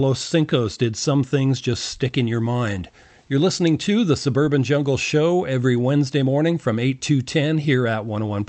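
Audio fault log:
throughout: clock drift between sender and receiver. The sending side's clock runs about five percent fast, so audio arrives slightly quicker than the receiver plays it out, and its jitter buffer keeps overfilling. To stop the backlog growing, the receiver has to keep discarding audio for the whole clip. On a waveform, the speech rhythm looks subtly compressed, with no stretch free of small adjustments; on a spectrogram the overall timeline runs slightly short.
0.06 to 8.43 s: repeated timing corrections. The receiver keeps cutting out short pieces, an effective rate of 105 percent, and every edit goes the same way: removal, never repetition. The cuts are spaced unevenly. A spectrogram shows thin vertical seams at each splice, with harmonics jumping slightly, all under the flat ceiling at 8 kHz left by the Opus call path. The waveform shows abrupt envelope joins.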